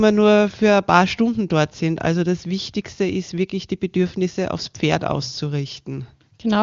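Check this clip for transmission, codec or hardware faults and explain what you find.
Nothing stood out on listening to this speech, which comes across as a wideband HD Voice call at its highest rate, with content stopping at about 7.3 kHz as that path normally does.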